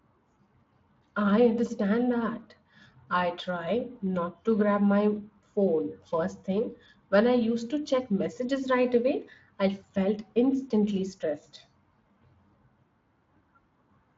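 It's a speech recording, and there's nothing technically wrong to point to anywhere in it.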